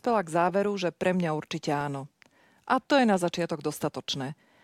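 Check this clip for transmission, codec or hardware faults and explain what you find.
Two brief underruns with held sample occur in this speech, at 1.81 s and 3.35 s. The output buffer ran dry for 0.83 ms and 1.33 ms, the second fitting a 64-sample gap. The converter held its last value until data returned, and roughly 0.7 ms and 1.5 ms of live audio were lost.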